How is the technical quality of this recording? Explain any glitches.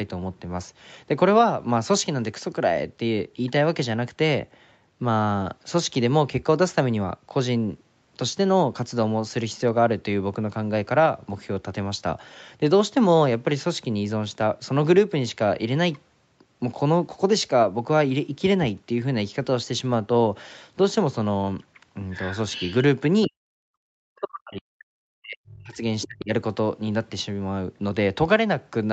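The speech has two echo-control faults late in the clip, with the spectrogram showing nothing above 8 kHz.

Other side's voice leaking through, at 22.12–22.36, 22.53–22.75 and 26.02–26.07 s: a second voice about 15 dB below the speech, likely uncancelled loudspeaker echo, seen as faint extra harmonic traces.

Speech suppressed in double talk, at 23.27–24.68, 25.17–25.82 and 26.06–26.32 s: the echo canceller likely ducked the talker, by up to roughly 40 dB, leaving visible dips in the waveform and spectrogram.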